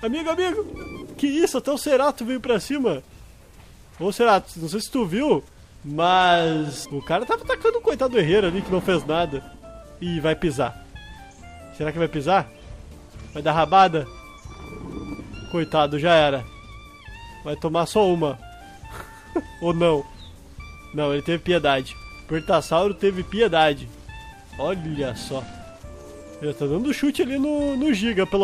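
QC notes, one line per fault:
No faults found, so there are no QC notes to list.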